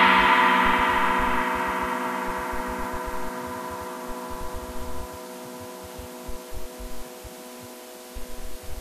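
Sound recording, no technical faults detected.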